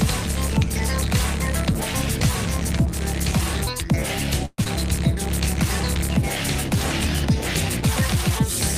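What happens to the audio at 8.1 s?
Nothing goes wrong at 8.1 s: the audio there is intact, with no dropout, click, distortion or other fault to be heard.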